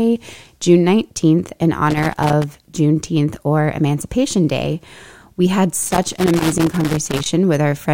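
At 1.90 s the speech breaks into loose connector crackle, lasting until 2.44 s. A worn contact is making and breaking as it moves. The signal is chopped into rough scratching. It returns from 5.83 s to 7.26 s, a longer irregular burst of crackle.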